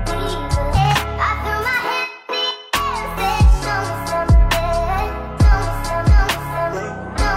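Nothing stood out on listening to this recording.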